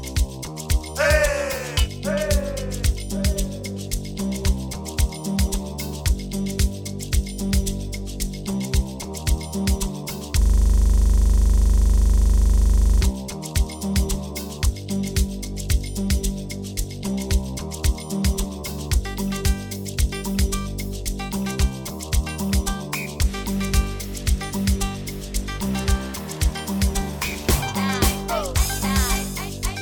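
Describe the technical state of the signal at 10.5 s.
At 10.5 s the signal is caught in a system hang loop running from 10.42 to 13.02 s. The system froze while playback kept cycling one 40 ms buffer, repeated 65 times, giving a steady 25 Hz buzz. The waveform shows one identical repeating segment, and the spectrogram shows evenly spaced vertical stripes.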